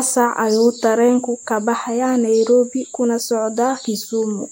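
No technical faults can be heard anywhere in it.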